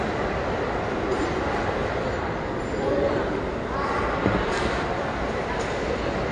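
A lossy encoder starved of data, likely AAC compression at a low rate, has reduced this recording of sounds for its whole length, and the damage is plainly audible. Nothing survives above 9.6 kHz, which fits AAC-LC running at around 32 kbps, where the coder drops the top band and coarsely quantises what remains. The sounds come across dull and band-limited, with transients smeared and a warbling, fizzy texture in the upper range.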